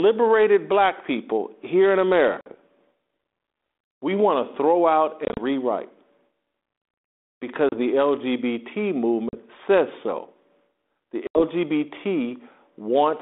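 Speech carried over what sounds like a 32 kbit/s G.726 ADPCM link, with a narrow telephone band of about 250 Hz to 3.6 kHz. It has five bursts of packet loss on an ADPCM call, at 2.41, 5.25, 7.69, 9.29 and 11.27 s. Each leaves a hard-edged gap of 30 to 80 ms, and the one at 5.25 s is broken up over about 120 ms. Afterwards the decoder's predictor and step size have drifted from the sender's, so the sound comes back slightly distorted before settling.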